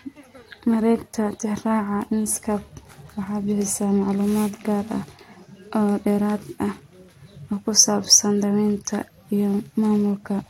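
No technical faults are audible.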